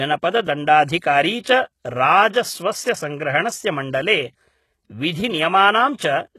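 Throughout the speech there is heavy codec damage, and the spectrum stops at about 12.3 kHz. The treble is present but sounds rebuilt rather than recorded: s sounds come out gritty, metallic or lispy. The likely cause is HE-AAC compression at a rate that fits about 16 kbps. Spectral band replication copies lower bands upward under a coarse envelope, so harmonics fail to line up across the crossover. A plain low-pass filter would simply remove the top instead of synthesising it.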